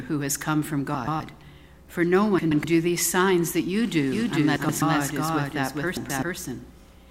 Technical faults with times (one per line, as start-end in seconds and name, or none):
0.94-1.20 frames out of order
2.38-2.64 frames out of order
4.12-7.10 doubled audio track
4.56-4.82 frames out of order
5.97-6.23 frames out of order